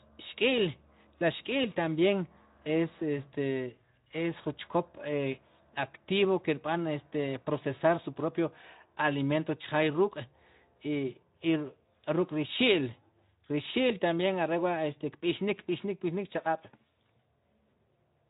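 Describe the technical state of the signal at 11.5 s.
At 11.5 s the speech is intact, with no dropout, click or other fault, only the narrowband Speex coding with nothing above about 3.8 kHz.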